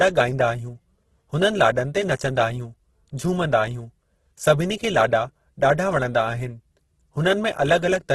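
Throughout, the speech sounds rough and grainy, with nothing above 12.1 kHz. That is likely heavy Opus compression near 12 kbps, filling starved bands with noise.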